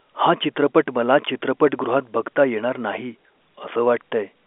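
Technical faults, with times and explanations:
No technical faults can be heard in this speech.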